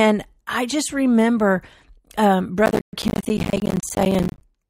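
At 2.66 s, processor overload crackle begins and runs to 4.41 s. The processor cannot finish its short buffers in time, about 10 ms each. Around a hundred deadlines are missed. Each leaves a brief silent gap, so the speech sounds gritty and torn.

From 2.81 to 2.93 s, a playback stall cuts the speech off completely for 120 ms. It then resumes. The likely cause is the player running out of data or its thread being blocked, so output went silent until recovery.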